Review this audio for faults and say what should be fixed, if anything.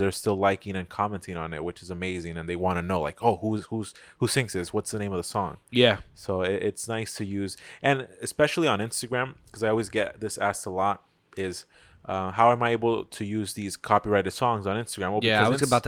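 Nothing here needs fixing; I listened all the way through and didn't catch a single fault in the speech.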